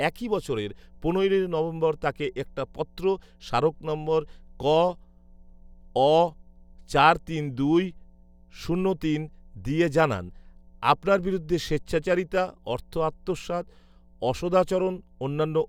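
A steady mains hum at 60 Hz runs under the speech from start to finish, sitting roughly 35 dB below it. A ground loop or nearby transformer has let the power line leak into the signal, adding a constant low drone with some low harmonics.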